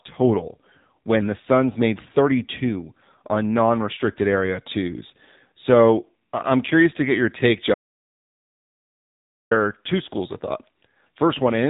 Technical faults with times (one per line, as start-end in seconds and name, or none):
0.00-11.70 AMR narrowband mobile codec
7.74-9.51 audio dropout to silence